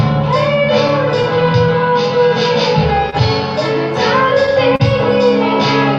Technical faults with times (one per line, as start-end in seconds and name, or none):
0.00-5.99 clock drift between sender and receiver
0.62-2.30 repeated timing corrections
3.10-3.14 short stall from a late packet
4.76-4.82 short stall from a late packet